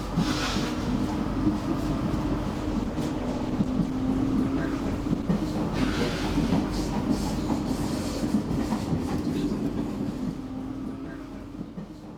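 The audio has a call bitrate drop from 2.54 s to 5.36 s. The call's bandwidth estimate fell, so the encoder was told to spend far fewer bits. It then coded the sound more coarsely and trimmed away the high frequencies. The sound fits a fall from about 48 kbps to about 14 kbps. It stays at that lowest rate for about 2.75 s. The bitrate recovers at 5.36 s, and the sound clears after that point.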